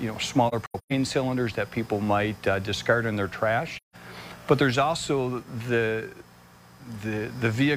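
Two soft dropouts from AAC frame loss with muting, at 0.48 to 0.92 s (gaps scattered across that stretch, the longest around 150 ms) and 3.77 to 3.96 s. Lost frames were zeroed, so the sound fades out and back in.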